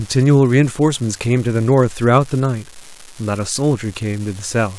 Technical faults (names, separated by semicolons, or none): unreliable data bit